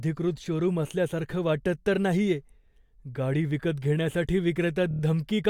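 From 4.91 to 5.01 s there are repeated frames. One short block of about 36 ms, which fits a pair of compressed frames, was sent again. The decoder plays it four extra times. The speech stutters there, and the audio runs about 105 ms longer.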